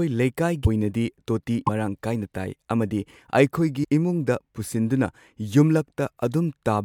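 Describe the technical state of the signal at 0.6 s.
Just after 0.6 s, from 0.64 to 0.67 s, the speech jumps ahead with a brief glitch, likely a broken MP3 bit reservoir, where a frame fetches borrowed data from the wrong bytes.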